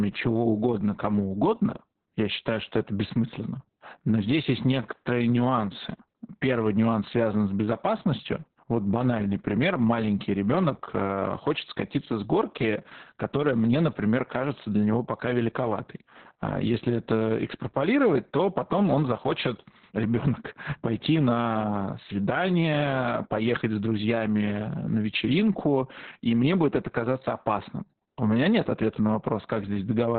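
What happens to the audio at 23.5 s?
At 23.5 s it's the same Opus voice compression heard through the whole clip. A starved SILK coder, which fits roughly 6 kbps, cuts everything above 4.4 kHz, so speech sounds muffled, hoarse and slightly robotic.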